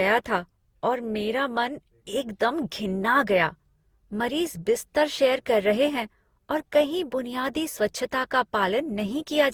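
Speech throughout, with a swirly, hollow, smeared quality and blurred consonant attacks, classic generation loss, likely from about ten passes through an Opus chain around 64 kbit/s.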